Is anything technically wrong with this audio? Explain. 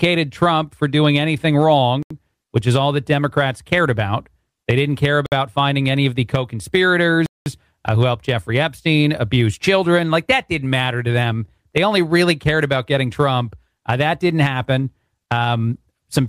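Yes. Three short gaps of hard silence break the audio at 2.03 to 2.10 s (79 ms), 5.26 to 5.32 s (58 ms) and 7.26 to 7.46 s (200 ms). These are likely Bluetooth stalls: interference delays packets, the headphone buffer runs dry, and playback halts until the resent data arrives. The gaps are true silence, not smeared or concealed sound.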